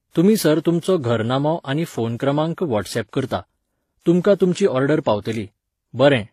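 From start to finish the speech has a layered, smeared coarseness: a swirly, watery texture sits on top of a second, grainier roughness, and nothing is heard above about 14.9 kHz. The likely cause is transcoding between lossy codecs, where the sound was encoded at a very low bitrate and then re-encoded, pointing to an HE-AAC stage followed by WMA. The later encoder spent its bits reproducing the earlier damage and added its own artefacts, so both kinds of distortion are heard at once.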